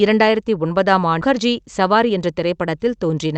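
Speech over a call path with an 8 kHz ceiling that shows as a flat top edge on a spectrogram. At 1.21 to 1.23 s a skip ahead drops roughly 0.7 s of audio with no fill, and the waveform joins the two sides almost directly, leaving an abrupt seam. From 1.81 to 2.27 s a jitter buffer speed-up plays the speech about 10% fast at unchanged pitch by removing roughly 50 ms of pitch periods, so harmonics stay level while syllables look compressed in time.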